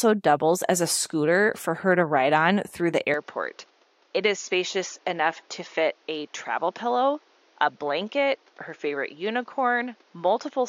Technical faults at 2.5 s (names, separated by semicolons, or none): none